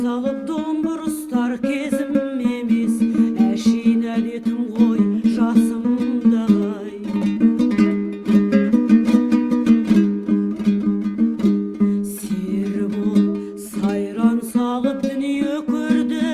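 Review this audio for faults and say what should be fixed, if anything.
No faults; nothing needs fixing.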